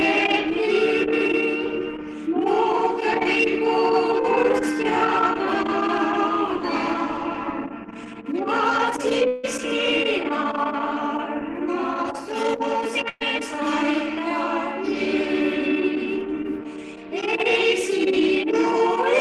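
From 9.27 to 9.45 s the audio stops progressing and the last sound is held and stretched for about 160 ms as a fading buzz or hiss, with no stretch of true silence. About 160 ms of material is gone when playback resumes further on. This is likely a long network dropout, where no packets reached the receiver for a while and its concealment kept extending the final sound until the stream returned.

At 13.09 to 13.22 s a burst of packet loss cuts out roughly 120 ms of audio. For about 110 ms the receiver repeats the preceding sound while turning it down, so it comes across as a held, dimming buzz or hiss. That is followed by about 10 ms of silence before the stream picks up again, with the lost stretch simply skipped rather than played late.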